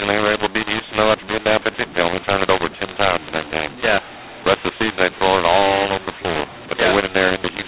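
From start to finish the speech carries a mu-law and A-law mix-up. It was encoded with A-law but decoded as mu-law. Sample levels come out scrambled, so it sounds harsh and distorted. Quiet stretches lift above silence and fill with noise. The 4 kHz telephone band itself is intact.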